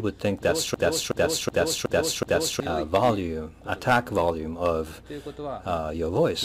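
From 0.74 to 2.60 s, a system hang loop repeats one 0.37 s slice five times. It's a stutter at 2.69 Hz, which fits a 16384-sample buffer.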